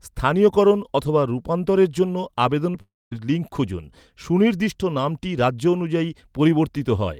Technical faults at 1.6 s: none

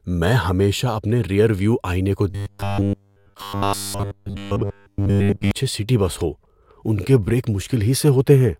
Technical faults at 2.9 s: robotic sound from repeated short buffers

